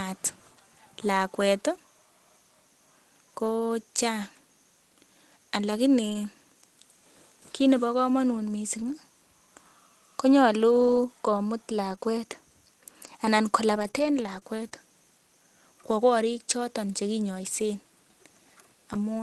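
Between 6.09 and 14.73 s a handful of packets went missing, causing scattered short gaps; the receiver bridged each hole, none much longer than 20 ms, by extending the preceding sound, so the speech stays clear but picks up brief ticks and tiny smeared hiccups.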